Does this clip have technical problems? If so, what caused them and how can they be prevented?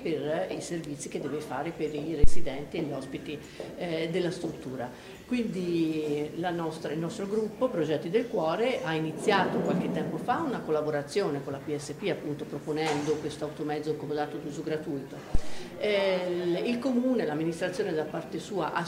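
Yes. Two phantom power thumps occur, at 2.24 to 2.54 s (peak about -6 dBFS, decaying in 67 ms) and at 15.35 to 15.73 s (peak about -12 dBFS, decaying in 86 ms). Switching the 48 V supply on a live input sends a DC step through the coupling capacitors, heard as a deep thud. On a waveform, each is a large one-sided swing easing back to zero; a spectrogram shows a brief low-frequency blot. Mute the channel before toggling phantom power.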